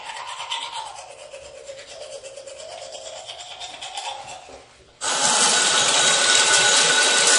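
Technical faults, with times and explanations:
Throughout, MP3 compression (likely). Nothing is heard above 10.6 kHz, so the top end sounds dull. The encoder ran short of bits, which fits about 40 kbps. Weak frequency lines flicker between frames, leaving plainly audible watery, swirly artefacts and smeared attacks.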